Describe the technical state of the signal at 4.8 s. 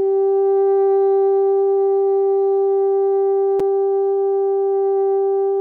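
At 4.8 s the music signal is intact, with no technical fault present at that moment.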